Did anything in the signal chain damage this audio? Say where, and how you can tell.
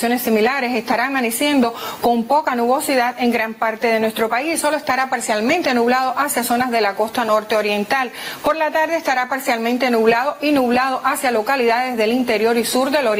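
Yes. Across the whole clip the level swells up in the gaps and sinks each time a loud sound arrives, a breathing swing of around 10 dB, while loud and quiet passages sit unnaturally close in level and the sound comes across squashed. That is gain pumping, and the likely cause is at the input stage: the microphone gain set far too high, with a fast limiter or compressor clamping down on every peak and releasing between them.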